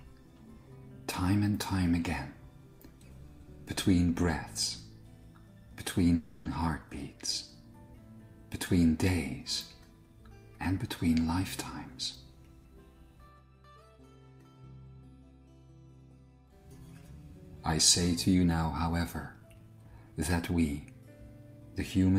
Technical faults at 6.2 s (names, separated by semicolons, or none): call audio freeze